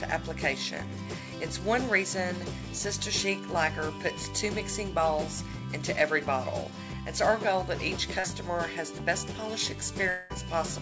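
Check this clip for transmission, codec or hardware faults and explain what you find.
Two transmission faults can be heard. The audio comes through a call path whose band stops at 8 kHz, consistent with a G.722 wideband codec.

Short concealed packet loss, 8.20 to 8.26 s: roughly 40 ms of audio failed to reach the decoder in time. The receiver filled about 36 ms by extending the preceding sound and then merged back into the real signal, producing a brief smear or wobble.

Long network dropout, 10.10 to 10.32 s: about 0.2 s of audio is replaced by a synthetic continuation of the previous sound, a fading buzz or hiss with no silent gap. A likely cause is a stretch of lost network packets that the receiver concealed with roughly 200 ms of invented signal before real audio resumed.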